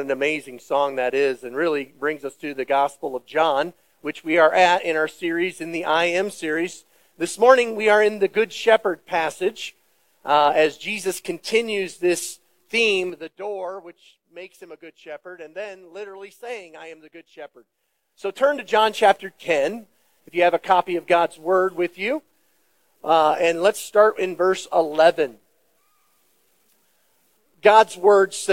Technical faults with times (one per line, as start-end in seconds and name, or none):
13.00-13.37 zipper noise
17.37-18.95 zipper noise